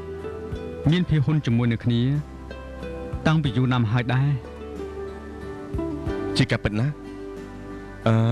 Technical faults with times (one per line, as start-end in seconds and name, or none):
none